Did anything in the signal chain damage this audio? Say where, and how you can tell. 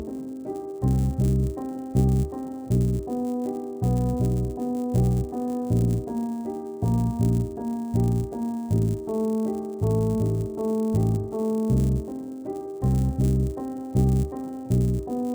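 Yes, at the rate converter: a 100 Hz buzz under the sound whenever there's signal. That's a resampler restarted on every 10 ms block, 16 to 48 kHz.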